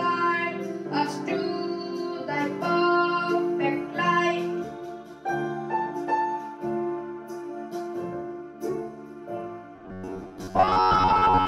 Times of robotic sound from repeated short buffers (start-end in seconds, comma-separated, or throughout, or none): 9.76-11.48